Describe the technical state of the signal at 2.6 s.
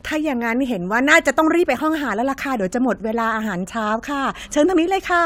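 At 2.6 s the speech signal is intact, with no audible technical fault at that moment.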